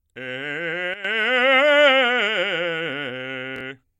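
A short music excerpt carrying two faults. At 0.94 s the whole signal, background noise included, drops abruptly by about 12 dB and snaps back at 1.05 s, with a step at each edge. This sudden gain jump is likely a digital gain change applied sample-to-sample with no ramp. Between 3.56 and 3.61 s there is a brief jumbled moment: chunks out of order, where one block of roughly 21 ms plays one block late, behind the audio that should follow it. Nothing is lost, but the swap creates three hard joins.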